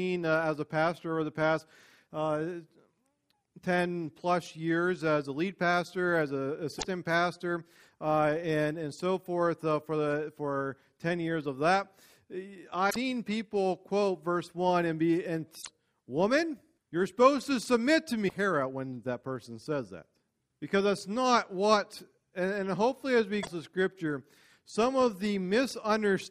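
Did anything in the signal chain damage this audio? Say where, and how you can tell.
Yes, at the codec: damaged data in a compressed stream. Glitches come at 6.75, 12.87, 15.58, 18.25 and 23.39 s. Corrupt frames knock the decoder out of sync.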